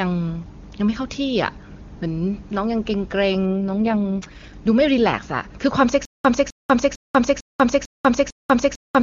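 It's a speech clip over AMR-WB HD Voice, which sounds clean at first. Then from 3.48 to 4.54 s there's an AMR rate drop. The voice turns rough and synthetic with the band unchanged, which fits the codec falling from its top 23.85 kbit/s mode to about 6.6 kbit/s. From 6.05 s to the end there's a stutter with silent gaps. A 256 ms burst repeats six times, with about 194 ms of digital silence between repeats, every 450 ms. It's likely a stalled stream replaying its last fragment.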